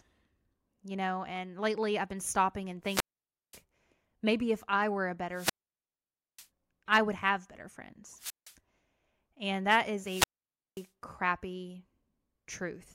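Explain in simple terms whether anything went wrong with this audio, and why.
Wireless microphone squelch dropouts interrupt the speech four times: 2.84–3.62 s after "I've been stopping and", 5.32–6.48 s, 8.16–8.55 s and 10.01–10.90 s. Each time the radio link weakens, hiss briefly rises, and the receiver mutes the output for 0.17 to 0.89 s before the voice returns.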